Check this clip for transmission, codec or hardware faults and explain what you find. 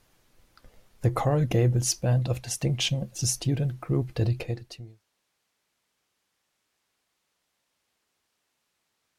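No transmission, codec or hardware faults found; the speech tapers off in a smooth, deliberate fade-out from around 4 s to 5.04 s, with no click or hard edge at the end.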